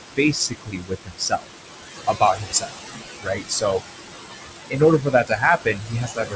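Noise suppressor artifacts run through the whole recording. The suppressor pulls down whatever it classes as steady background by about 19 dB, frame by frame, so the room noise, which sits only about 7 dB below the speech, dips away in pauses and swells back under speech. All content stops at 8 kHz, which fits a wideband call codec such as G.722.

Speech cut by the noise suppressor happens five times, where the suppressor mistakes parts of the speech for noise and turns them down with the background. From 0.16 to 1.48 s, roughly a second of speech is attenuated, by as much as about 21 dB. Further cuts fall at 2.07 to 2.68 s (about 16 dB), 3.21 to 3.81 s (about 19 dB) and briefly at 4.69 to 4.81 s (about 20 dB). From 5.0 s to the end, drops reach about 20 dB. These passages sound swallowed and faint.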